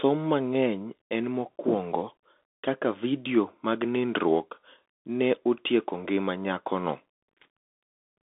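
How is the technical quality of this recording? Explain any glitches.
Quality is poor, with one fault present throughout. Bluetooth CVSD headset codec: one-bit adaptive steps leave scratchy sibilants and granular hiss, with a spectrogram showing speech confined to 250 Hz to 3.6 kHz.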